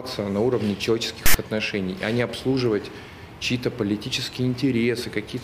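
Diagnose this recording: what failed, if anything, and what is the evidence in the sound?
The failure sits at the storage and playback stage: the decoder mistook a block of text tags inside the file for audio data and played those bytes as samples. This is file tags played as audio. From 1.26 to 1.34 s, about 85 ms, the sound is replaced by a loud, harsh rasp with abrupt edges. Because text bytes cluster in a narrow range of values, the waveform sits offset to one side rather than centred on zero.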